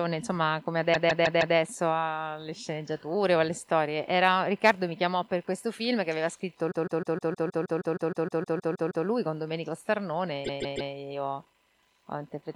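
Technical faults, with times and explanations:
0.93–1.56 s, 6.70–9.05 s and 10.44–10.91 s: repeated frames. A 157 ms block of compressed frames, which fits a run of six, was resent 4, 15 and 3 extra times, so the sound stutters and stretches by 0.63, 2.35 and 0.47 s.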